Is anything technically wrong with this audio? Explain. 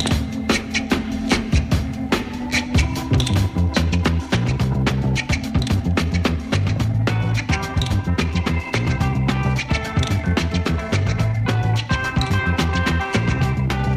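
Yes. From 3.76 s to the end, a time-stretched section plays about 1.47 times faster, sounding rushed, likely from software dropping short pieces. Unlike a plain speed-up, the pitch stays the same.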